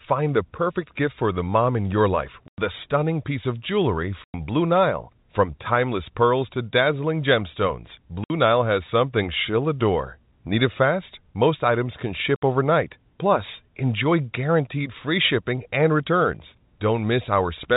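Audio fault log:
2.48–2.58 s, 4.24–4.34 s, 8.24–8.30 s and 12.36–12.41 s: packet loss filled with silence. The speech drops out abruptly into dead silence for 100 ms, 100 ms, 60 ms and 60 ms. Packets never arrived and the receiver played silence in their place. The gap lengths all fit whole multiples of 20 ms packets. The surrounding audio is band-limited to the 4 kHz ceiling of the G.711 telephone path.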